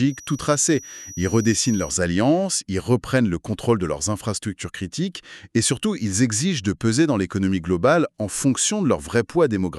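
From 0.0 to 2.0 s a feedback whistle sits behind the sound: a thin, steady tone at 5.8 kHz, around 20 dB below the main signal, swelling and fading slowly in level before it stops at 2.0 s. The likely cause is a loudspeaker-to-microphone loop running just at the edge of instability, where the loop gain at that one frequency is high enough to sustain a ring but not high enough to build into a full howl.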